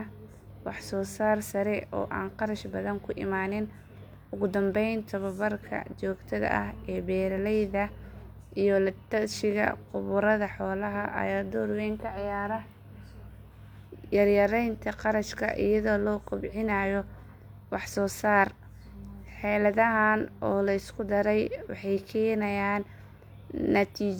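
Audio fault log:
No faults detected anywhere in the speech recording.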